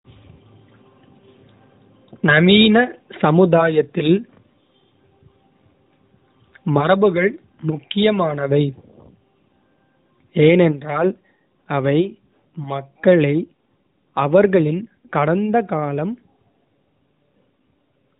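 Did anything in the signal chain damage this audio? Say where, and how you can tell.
No, nothing in the signal chain damaged this speech recording. What you can hear of the chain is the AMR narrowband mobile codec: nothing above 4 kHz, and a faint synthetic edge on the voice that fits its 12.2 kbps mode.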